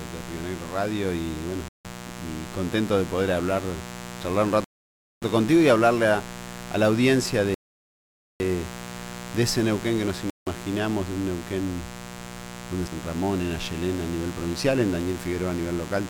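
A mains buzz runs under the whole clip, locked to 60 Hz and sitting roughly 15 dB below the audio. It is not a smooth low hum. Sharp switching spikes, twice per mains cycle and typical of a dimmer, rectifier or missing shield, spray harmonics of 60 Hz up into the kilohertz range. That is why it sounds raspy and edgy rather than like a pure bass tone. It stays steady and does not follow the sound.

Against that bed, the audio cuts fully to silence four times: at 1.68 to 1.85 s (164 ms), 4.64 to 5.22 s (575 ms), 7.54 to 8.40 s (857 ms), and 10.30 to 10.47 s (170 ms). These gaps are a likely Bluetooth stall, where interference held up packets, the headphone buffer ran dry and playback paused until retransmissions arrived. Unlike a brief codec dropout or a click, each gap is true silence that varies widely in length, and then playback simply resumes.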